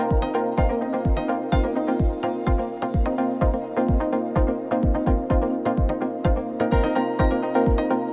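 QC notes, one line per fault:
No faults to note.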